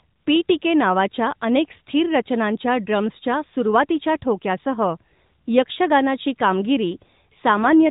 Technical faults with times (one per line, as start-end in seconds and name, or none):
7.57-7.89 AMR rate drop